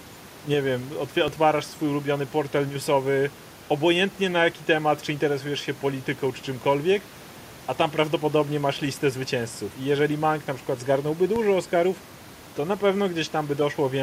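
At 1.28 s, after "nie wiem", and at 11.36 s, after "na przykład zgarnąłby", a DC step shifts the waveform's zero line. Each is a low thump that then eases back through a roughly 2 Hz high-pass. On the spectrogram it shows as a brief vertical smear at the bottom.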